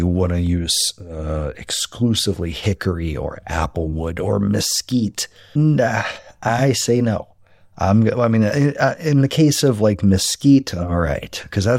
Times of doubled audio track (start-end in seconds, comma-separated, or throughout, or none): none